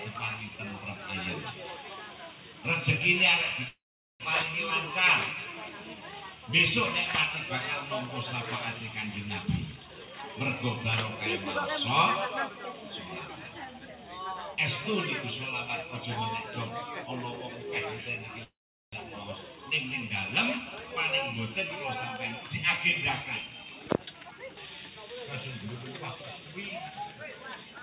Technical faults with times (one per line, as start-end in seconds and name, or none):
3.68-4.23 call audio freeze
9.43-10.30 jitter buffer speed-up
12.49-14.56 jitter buffer speed-up
18.43-18.95 call audio freeze
23.24-27.02 jitter buffer speed-up